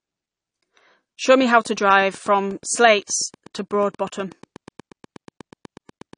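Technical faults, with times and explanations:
Throughout: AAC compression. The speech has likely been through AAC-LC at a low data rate, which fits around 32 kbps. The encoder spent too few bits on each frame's frequency lines, so it dropped everything above 9.8 kHz and quantised the rest coarsely against its hearing model. The codec damage is plainly audible: the speech sounds dull and smeared, with a warbling, fizzy texture on sibilants and held sounds where bands were starved or filled with substitute noise.
1.3 to 6.14 s: Train of clicks. Something is injecting a short pulse into the signal at a steady 8.3 per second, likely interference from nearby equipment or a faulty connection or power supply. Around forty clicks of near-identical shape arrive at regular spacing, peaking at about the level of the speech itself. They are heard as a rapid, even ticking laid over the speech and carrying on through the pauses, right up to the end of the clip.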